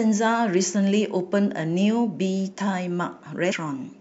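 Speech, with one brief fault. At 3.51 s there is a short disruption from damaged data in a compressed stream. Some of the encoded bytes there are corrupt. The decoder misreads that frame, loses sync, and must find the next valid frame header before clean audio resumes.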